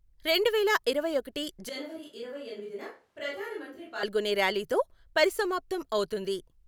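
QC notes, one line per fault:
1.69–4.03 s, switch to a distant microphone: right after "రెండువేల ఇరవై ఒకటి" the speech abruptly turns roomy and hollow, thinner in the bass, and drops about 10 dB with audible room noise roughly 35 dB below it. This is likely a failed close mic, with a farther one covering until the sudden return.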